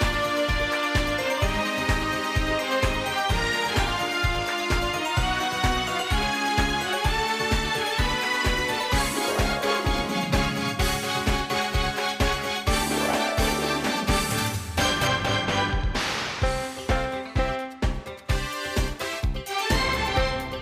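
De-emphasis applied wrongly runs from 15.07 to 18.26 s. A treble-reducing filter, the kind meant to reverse a matching high-frequency boost, has been applied to audio that never carried that boost or has been applied a second time. The result is a gradual downward tilt in the upper range, about 11 dB lower at 10 kHz than at 1 kHz. For those three seconds the sound turns dull and muffled, with its top end rolled away.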